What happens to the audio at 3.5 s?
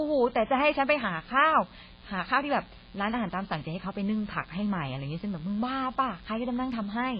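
Mains buzz is present at 3.5 s, as it is across the whole clip. A rectifier, unshielded cable or nearby dimmer is letting sharp switching spikes from the 60 Hz supply into the signal, twice per cycle. Because the spikes are so abrupt, their harmonics climb well into the kilohertz range rather than staying a low hum. The result is a steady, raspy buzz sitting roughly 25 dB below the speech, audible beneath every syllable and in the gaps.

The same moment also carries transcoding between lossy codecs, again spanning the entire clip. The audio has likely passed through a very low-rate MP3 stage and then been re-encoded to AAC-LC, which fits something like 16 kbit/s followed by 32 kbit/s. The second encoder spends its limited bits reproducing the first one's damage while adding its own. Nothing survives above 5 kHz, so the speech sounds dull and muffled, with the different coding artefacts heard together.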